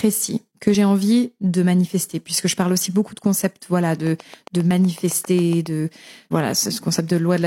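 French speech with two overlap-between-stream-segments skips, at 0.75 s, just before "envie de manifester puisque", and at 4.71 s. Each removes about 14 milliseconds where segment timestamps overlap, roughly 4 s apart, as 4-second segments would. The waveform shows an abrupt step, and the spectrogram a thin full-height line. From 4.07 to 5.67 s, just after "beaucoup de concepts voilà", a train of clicks ticks at a regular 7.4 per second, about fifteen in all, peaking about 5 dB above the speech. It appears as evenly spaced vertical stripes and sharp spikes, likely from electrical interference or a faulty connection.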